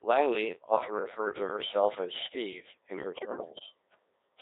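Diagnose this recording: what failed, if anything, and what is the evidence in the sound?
Codec 2 vocoder, throughout: a codec-stage fault. The speech sounds heavily robotic and buzzy because the waveform is never transmitted. At 1.6 kbit/s only pitch, voicing, energy and a coarse spectral envelope survive, and the decoder rebuilds everything from sine waves.

Bit errors on digital voice radio, 3.16 to 3.66 s: a network/transmission fault. The synthetic voice lurches in pitch, level and tone colour, breaking into warbling gibberish. The half-second burst fits roughly one flipped bit in ten corrupting about a dozen vocoder frames.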